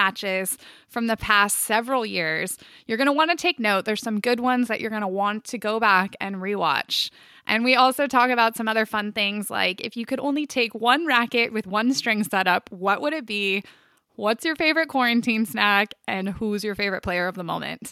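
Listening closely to the speech recording, nothing stood out as a technical fault at any point.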